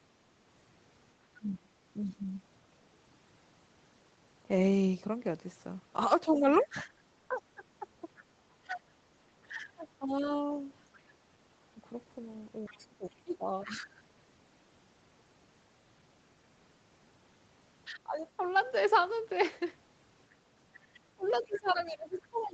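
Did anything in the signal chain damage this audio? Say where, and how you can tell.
Yes. The talker's speech sinks by around 20 dB three times: 1.38 to 2.32 s (under a second in total is affected), 6.25 to 13.92 s (about 3 s of it ducked), and from 17.87 s to the end. This is speech suppressed in double talk at the call-processing stage. The echo canceller most likely could not tell the talker from the loudspeaker echo while both sides spoke, so it attenuated everything.

In the same windows a faint second voice sits under the talker. This is the other side's voice leaking through. It appears at 1.46 to 2.14 s, about 30 dB down, at 6.33 to 13.66 s, about 25 dB down, and from 21.25 s to the end, again about 25 dB down. The far end is likely playing on a loudspeaker, and the echo canceller probably left residual echo in the microphone feed. Nothing is audible above 8 kHz, which fits a wideband Opus call path.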